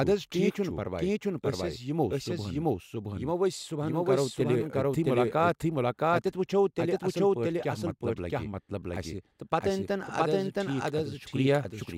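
From start to finish the speech is doubled. A second, full-band copy trails the original by roughly 0.7 s, at about the same loudness, so every phrase comes back as a clean repeat with no decay or room colour. That's a doubled audio track, likely from the same signal being captured twice, once through a slower path, or from an edit that left two copies out of step.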